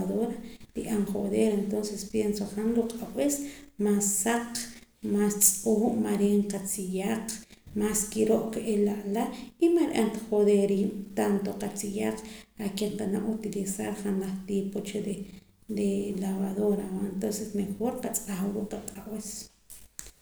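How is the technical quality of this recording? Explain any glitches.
No technical glitches are audible anywhere in this speech recording. The audio runs continuously, with nothing breaking in at any point.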